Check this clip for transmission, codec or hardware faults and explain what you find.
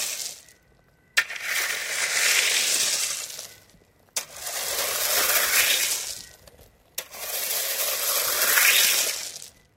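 No transmission, codec or hardware faults can be heard anywhere in the signal.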